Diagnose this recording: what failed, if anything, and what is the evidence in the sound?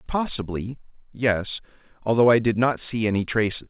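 Nothing failed: the speech carries the expected band limit of a WebRTC call path, with nothing above 4 kHz, which fits a narrowband codec such as G.711, and no stage from capture to playback shows a fault.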